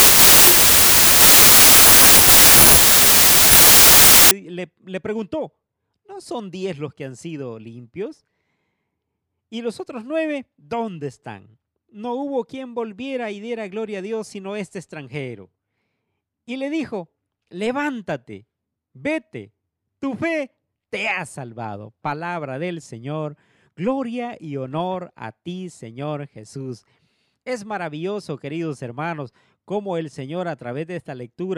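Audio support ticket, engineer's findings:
Wrong sample width, 0.00–4.31 s. Decode/read stage; fits 32-bit integer data unpacked as packed 24-bit. Samples straddle byte boundaries, so mismatched bytes are read as values. Loud noise, speech buried, slowed to 0.75x with lowered pitch.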